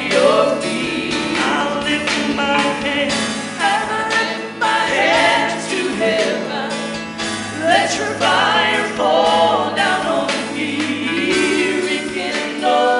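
No technical faults are audible.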